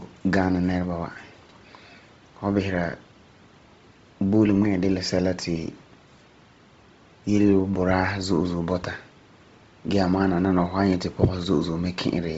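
From start to finish the speech has a heavy, grainy, breathy edge, and nothing comes through above about 7.7 kHz. That's most likely Bluetooth LC3 compression. The codec works in short transform frames, here consistent with 7.5 ms, and at a low rate, something like 24 kbps, it drops much of the upper spectrum and patches it with synthetic noise. That noise fill is the hiss-like texture riding on the consonants and the top of the voice.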